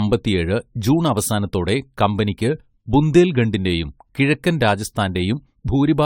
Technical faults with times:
0.00-6.06 generation loss

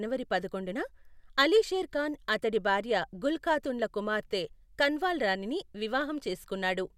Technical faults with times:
none

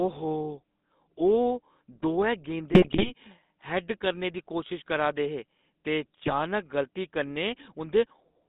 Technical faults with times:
0.00-8.49 GSM full-rate codec
2.72-3.12 GSM bit errors
6.22-6.35 GSM bit errors

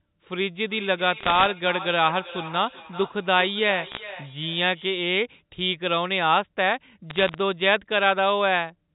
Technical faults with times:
0.61-5.02 feedback echo between two devices
1.20-1.46 bit errors on a digital phone line
3.86-3.97 bit errors on a digital phone line
7.10-7.38 bit errors on a digital phone line

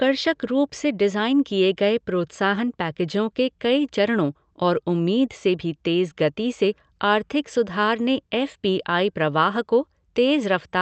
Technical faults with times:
none

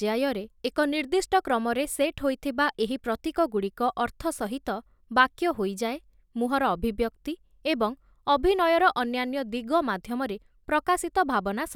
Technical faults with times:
none

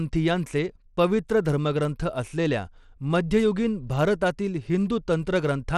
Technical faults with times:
0.00-5.78 Bluetooth SBC compression

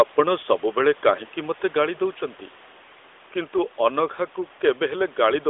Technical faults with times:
none

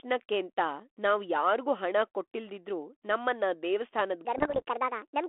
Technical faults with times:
4.25-5.28 section at the wrong speed
4.37-4.62 bit errors on an ADPCM link

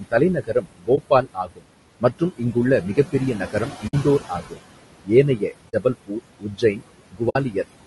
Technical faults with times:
0.00-7.86 noise suppressor artifacts
0.00-7.86 low-delay AAC compression
0.00-1.64 speech cut by the noise suppressor
0.95-0.98 AAC frame loss with muting
2.00-4.59 speech cut by the noise suppressor
3.87-3.94 AAC frame loss with muting
5.05-7.65 speech cut by the noise suppressor
5.69-5.74 AAC frame loss with muting
7.29-7.36 AAC frame loss with muting

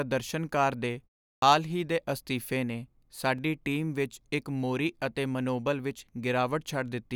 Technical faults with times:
1.37-1.42 clipped start after a pause
3.38 block of digital silence

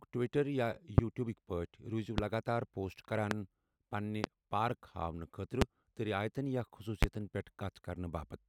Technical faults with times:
0.98-1.01 loud pop
2.18-2.21 loud pop
3.31-3.34 loud pop
4.24-4.27 loud pop
5.62-5.64 loud pop
7.03-7.05 loud pop

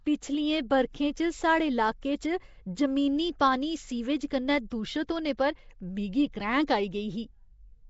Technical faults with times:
0.00-7.89 Nellymoser compression
3.39 pre-echo
4.70 pre-echo

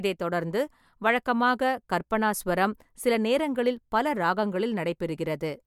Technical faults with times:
none

